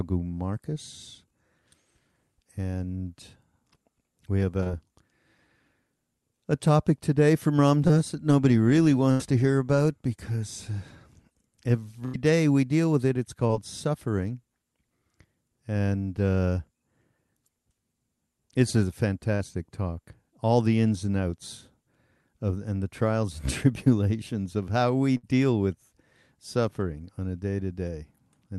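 At 4.63 s and 7.88 s a brief smear or wobble passes through the speech, and at 19.35 s a slightly longer wobble does the same. These are short concealed packet losses. About 20 ms of the call, and 40 ms at 19.35 s, never arrived in time, so the receiver extended the preceding sound and blended back into the real audio. At 9.11 s and 12.06 s a held buzz or fading hiss replaces about 80 ms of speech, and at 25.17 s about 60 ms. These are bursts of packet loss. Consecutive packets were lost, the receiver stretched and faded the last sound, and the speech resumes with that stretch gone. Underneath all of this, the call codec's band limit can be heard as top end rolling off around 12 kHz.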